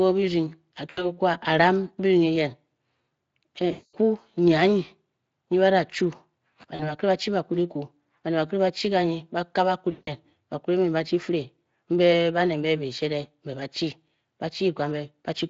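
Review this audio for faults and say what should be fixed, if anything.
VoIP packet loss concealed by the speech codec occurs at 0.89–1.06 s, 3.71–3.96 s, 6.75–6.92 s and 9.91–10.13 s, with gaps of about 80, 220, 40 and 160 ms. The Speex decoder, lightly coded elsewhere, fills each gap by repeating its last pitch and spectral shape at falling gain. This smears the speech into a fading buzzy tone or coloured noise, and it stays weak briefly after audio resumes. Forward error correction or a deeper jitter buffer would prevent this.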